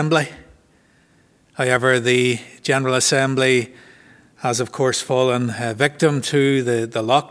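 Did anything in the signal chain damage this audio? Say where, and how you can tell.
No, nothing along the chain seems to have touched this one; I can't point to any stage where the sound was damaged.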